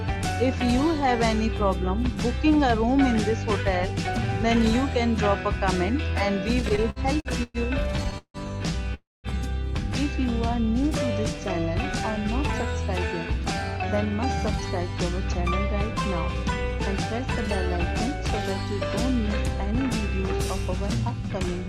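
From 6.61 to 8.37 s there's a run of repeated stalls, a stutter: eleven short hold-ups, the longest about 162 ms, where the jitter buffer kept running dry and the last sound got stretched, so it drags without losing anything. Then at 8.94 s comes a call audio freeze lasting about 0.3 s, with the held sound fading into roughly 200 ms of silence, likely from packets held up in transit, before picking up where it left off.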